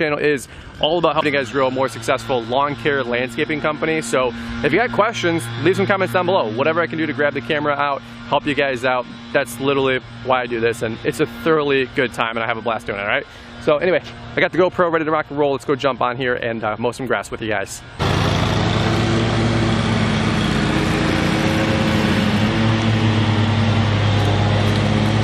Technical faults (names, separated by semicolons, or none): damaged data in a compressed stream